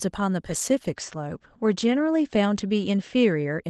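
At 0.5 s the speech goes through a call bitrate drop. The call's bandwidth estimate fell, and the Opus encoder had to spend far fewer bits. Before this, the call path carries audio up to 12 kHz. After it, the top end stops near 8 kHz, and the speech turns muffled and rougher. The coarsest stretch lasts about 1.08 s. The sound fits a fall from around 32 kbps to 12 kbps. It does not recover before the clip ends.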